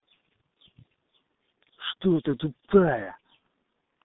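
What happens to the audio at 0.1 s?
At 0.1 s the G.723.1 codec is already at work, as it is throughout. Nothing above 3.8 kHz survives, and the heavy low-rate coding leaves the speech muffled and hoarse.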